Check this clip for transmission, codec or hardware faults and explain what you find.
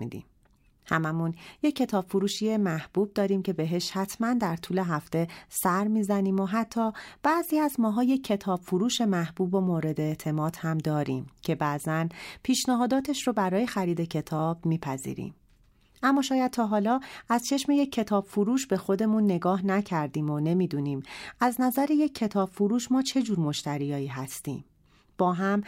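No transmission, codec or hardware fault can be heard in this speech recording, whose signal stays continuous and intact throughout.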